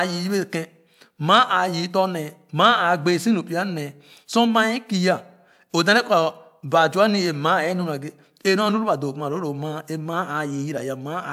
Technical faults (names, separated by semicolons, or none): none